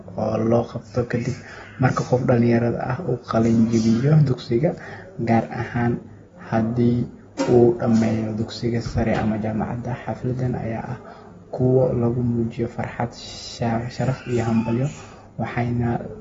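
From start to finish the speech sounds dull and smeared, with a fizzy, warbling edge on sibilants. This is likely AAC compression at a low bitrate, around 24 kbps. Unlike a plain low-pass filter, it also leaves a watery, shifting texture.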